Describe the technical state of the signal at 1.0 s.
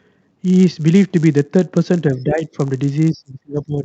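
At 1.0 s you're hearing the filter restarted on every block, which runs through the whole clip. The filter starts each block from silence, so the resulting transients form a 100 Hz buzz, which points to 10 ms blocks, rising and falling with the speech level.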